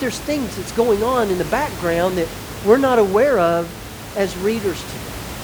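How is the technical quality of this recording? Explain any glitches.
The technical quality of this recording is good, and there are no glitches to explain.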